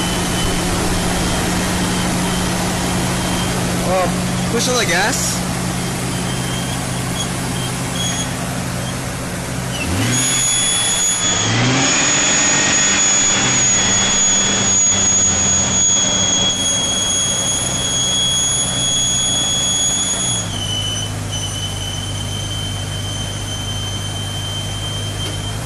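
At 11.13 s a digital radio blend to analogue occurs: over 123 ms the receiver cross-fades to the FM broadcast, so hiss rises to roughly 30 dB below the sound, and level shifts about 2 dB, until it returns at 16.61 s.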